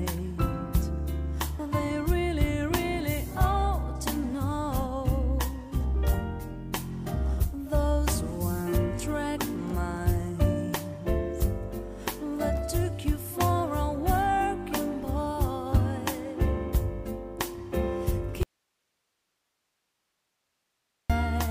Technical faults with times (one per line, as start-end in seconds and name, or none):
18.43-21.10 audio dropout to a faint residue